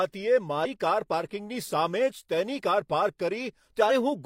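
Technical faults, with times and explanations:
0.61–0.67 s and 3.86–3.91 s, damaged data in a compressed stream: corrupted bytes in the encoded speech stream made the decoder misread frames and lose sync while it hunted for the next valid frame header, leaving a brief, roughly 60 ms glitch at each point.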